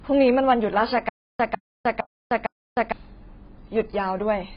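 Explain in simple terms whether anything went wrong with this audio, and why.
The speech sounds dull and muffled from start to finish, with nothing above about 5.1 kHz and a smeared, fizzy edge on hissing sounds. That is heavy AAC compression damage, likely from squeezing the audio into very little data so high detail gets thrown away.

Between 1.09 and 2.92 s there is a stutter with silent gaps. The same 0.15 s scrap of speech plays four times, each followed by about 0.31 s of dead silence, repeating every 0.46 s. The likely cause is playback stalling and replaying its last fragment, so the speech meant for that stretch is lost.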